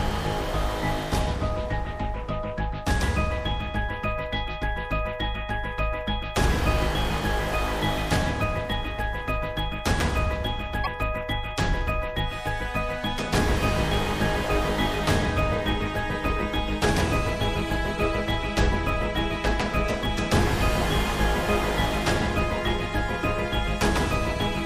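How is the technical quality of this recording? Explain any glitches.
The recording has one audible glitch, a short burst of damaged data in a compressed stream. From 10.83 to 10.87 s, roughly 44 ms, part of the encoded data was corrupted, so the decoder misread those frames, lost sync and had to find the next valid frame header. The result is a brief chirp, squawk, click or short hole unrelated to the surrounding sound. On a spectrogram it appears as a thin vertical smear or blocky patch across many frequencies. In the waveform it shows as an abrupt discontinuity in the signal.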